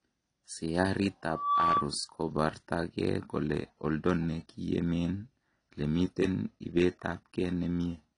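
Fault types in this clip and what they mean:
AAC compression: The speech sounds dull and smeared all the way through, with a warbling, fizzy texture on sibilants and held sounds, and nothing at all above 10.1 kHz. This is likely low-bitrate AAC-LC coding, which fits a rate around 32 kbps, where the encoder drops the top band and quantises the rest coarsely. On a spectrogram the energy stops at a flat ceiling near 10.1 kHz.
Loudspeaker feedback squeal: From 1.26 to 1.93 s a single 1.2 kHz tone swells out of the speech, reaching full strength over roughly a third of a second and then ending at about 5 dB above the speech. A microphone picked up the loudspeaker it fed, and at that frequency the loop gain went above one, so the tone fed on itself. On a spectrogram it shows as one bright horizontal line at 1.2 kHz. In the waveform the envelope rises over the first 0.3 s or so of the span.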